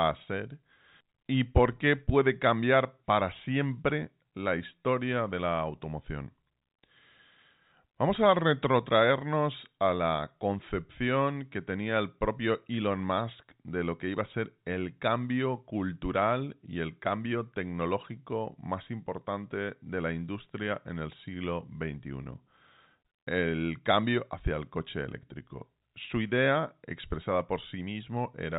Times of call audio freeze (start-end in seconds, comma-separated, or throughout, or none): none